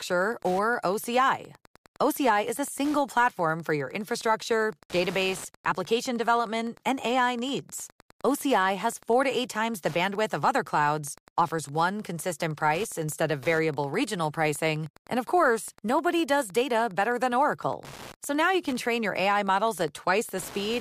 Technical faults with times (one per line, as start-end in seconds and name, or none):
0.00-20.81 Wi-Fi interference